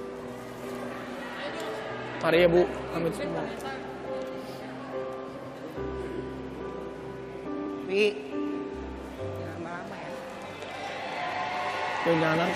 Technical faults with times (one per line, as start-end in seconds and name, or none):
5.36-5.55 frames out of order
7.47-7.66 frames out of order